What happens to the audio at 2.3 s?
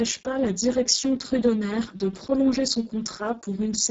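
Speex codec damage at 2.3 s, present throughout the clip: heavy CELP coding with too few bits for the excitation, consistent with a bitrate near 6 kbps, leaves the speech noisy and hoarse, with nothing above 7.7 kHz.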